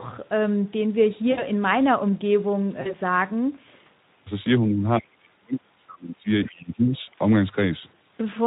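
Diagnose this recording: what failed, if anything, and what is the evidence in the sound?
At the codec stage, the speech was carried by the Speex codec at a low setting; the degree of damage fits a rate near 11 kbps. With so few bits for the excitation signal, the CELP model can't rebuild the voice's fine structure. Throughout the clip the speech sounds plainly hoarse and noisy. That is the coarse excitation being heard directly rather than masked.

On the network side, packets were dropped, and the Speex decoder concealed the gaps. It carried its last pitch and filter forward while fading the gain. The first gap runs from 1.31 to 1.43 s, which fits about 60 ms of lost audio. The second runs from 2.81 to 2.95 s, which fits about 40 ms. In each, the voice is stretched into a buzzy tone or a coloured noise that fades. It then stays weak for a short stretch after packets resume, because each decoded frame depends on the one before.

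In call processing, the echo canceller's double-talk handling likely cut the near-end voice while the far side was speaking, treating it as echo. From 4.62 to 6.27 s the speech is pushed down, at worst by roughly 35 dB, and about 1.5 s of it is affected. From 6.48 to 7.09 s it dips again by roughly 20 dB, over about half a second.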